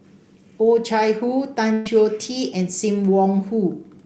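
A speech clip passed through a call codec whose top end stops near 8 kHz. At 1.73 to 1.87 s there is a burst of packet loss. About 120 ms is missing, papered over by a fading continuation of the preceding sound.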